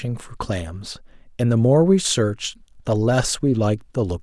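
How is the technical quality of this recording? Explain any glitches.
No technical glitches are audible.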